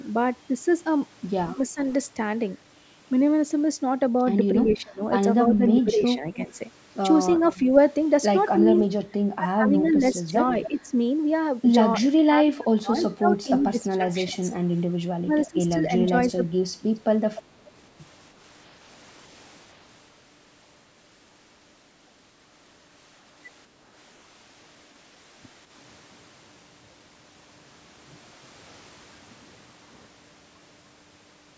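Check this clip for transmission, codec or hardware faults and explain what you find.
Two faults are audible, both typical of a speakerphone call with two people talking at once: speech suppressed in double talk and echo leak. The band tops out at 8 kHz, consistent with normal call microphone processing.

Speech suppressed in double talk: At 1.55–1.81 s the speech briefly dips by roughly 10 dB. From 4.67 to 17.02 s it repeatedly sinks or drops out, by as much as 30 dB, for around five seconds in total. The likely cause is an echo canceller that, while both sides were talking, could not tell this talker from loudspeaker echo and attenuated everything.

Echo leak: A faint, delayed copy of the speech trails about 297 ms behind, roughly 15 dB quieter, at 4.69–5.82 s, 7.38–10.91 s, 12.98–13.04 s and 15.44–17.43 s. It is likely residue that a loudspeaker-side echo canceller failed to remove, so that part of the sound its microphone picked up was sent back down the line.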